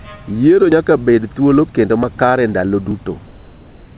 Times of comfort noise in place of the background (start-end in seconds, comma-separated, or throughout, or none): 3.26-3.97